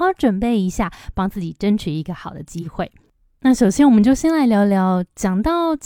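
At 2.61 s the speech hits an AAC frame loss with concealment. A gap of about 43 ms, which fits a single lost frame, was patched from the last good spectrum, so until 2.67 s the sound turns briefly smeared, noisy or phasey.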